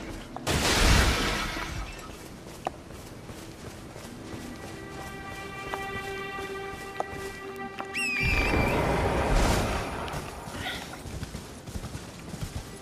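A flipped bit in the digital path, a bit error spike, briefly throws a sample value off by a power of two before it snaps back. It sounds like a sharp, broadband tick, unrelated to the surrounding sound, at 7.56 s (peaking about -19 dBFS, consistent with a single corrupted sample) and again at 12.42 s (about -25 dBFS, likely two adjacent samples).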